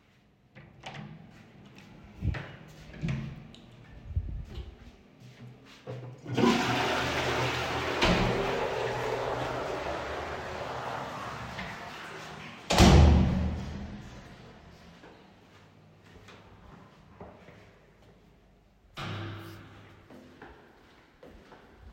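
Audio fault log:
The recording of sounds holds its level, timing and frequency balance intact the whole way through.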